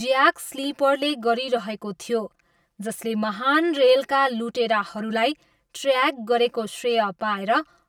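Speech with channel delay (comb filtering) throughout: one side lags around 5 ms, so the mono sum sounds hollow, with notches starting near 100 Hz.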